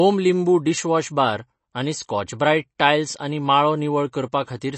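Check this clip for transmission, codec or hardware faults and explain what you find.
One codec fault runs through the whole speech clip. Throughout, there is plainly audible MP3 compression: nothing remains above 8.3 kHz, and sibilants swirl and chirp as weak frequency lines drop in and out between frames. This is likely a low-bitrate encode, consistent with around 32 kbps, forcing the encoder to cut treble and discard detail.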